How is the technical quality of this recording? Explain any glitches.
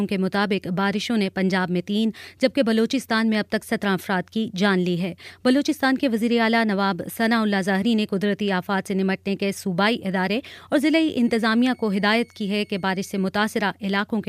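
One glitch stands out. From 11.24 to 13.24 s, a switching supply whistle near 2.2 kHz appears, drifting between 2.18 and 2.23 kHz as the supply's audible burst mode shifts, faint beneath the sound.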